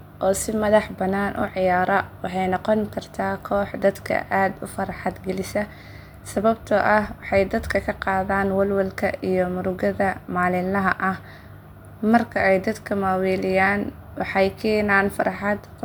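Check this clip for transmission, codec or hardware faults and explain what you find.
Nothing in the speech points to a problem in how it was carried, encoded or captured. There is nothing to report at any point in the recording.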